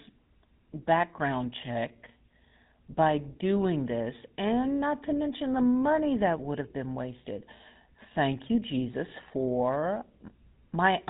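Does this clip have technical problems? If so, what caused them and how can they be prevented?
Yes. Throughout the speech runs the buzzy, gravelly roughness of the GSM full-rate codec, which rebuilds the voice from a vocal-tract model fed with coarsely spaced pulses. Nothing remains above 3.8 kHz. That pulse-driven grit separates it from plain band-limiting. Avoid by carrying audio over wideband paths.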